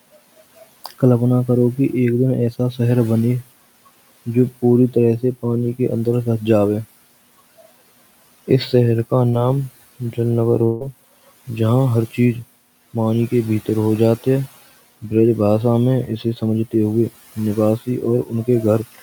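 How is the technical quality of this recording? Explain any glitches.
The recording has three kinds of glitch: two spots where speech was cut by the noise suppressor, one short concealed packet loss, and one longer gap, with room noise sitting about 22 dB below the speech throughout.

Speech cut by the noise suppressor, at 0.84 to 1.02 s and again at 18.25 to 18.48 s: the suppressor mistook parts of the speech for background and pulled them down along with it, by about 11 dB and about 12 dB. Roughly a tenth of a second in each stretch sounds swallowed and faint.

Short concealed packet loss at 9.29 to 9.35 s: about 40 ms of audio failed to reach the decoder in time, and the receiver patched 34 ms of it by extending the preceding sound before blending back into real audio. It comes across as a brief smear or wobble.

Long network dropout at 10.65 to 10.83 s: about 160 ms is missing, and 158 ms of that is filled with a stretched continuation of the last sound, so there is no silent stretch, only a buzzy or hissy smear before the speech resumes further on. 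The likely cause is a network interruption long enough that the receiver had to invent nearly the whole gap.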